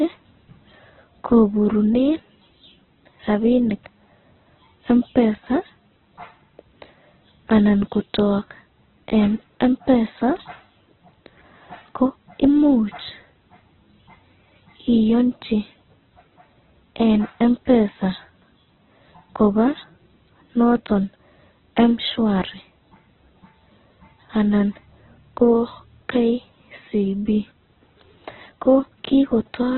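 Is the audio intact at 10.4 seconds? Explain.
No. At about 10.36 s a sharp snap lands on top of the speech, lasting only a few milliseconds. It is most likely an electrical switching spike, where a nearby switch, motor or static discharge throws a brief arc that the audio line picks up and adds to the signal. It sits over the sound rather than replacing it, a hard transient foreign to the speech itself.

Around that moment, as throughout the clip, the speech is rough, grainy and muffled, with nothing above about 4.2 kHz. This heavy damage likely comes from Opus compression at a very low bitrate, in the region of 8 kbps. With so few bits, the encoder keeps the energy in each band but fills the detail with folded or noisy content, which roughens the tone, while the narrowed bandwidth removes the upper range.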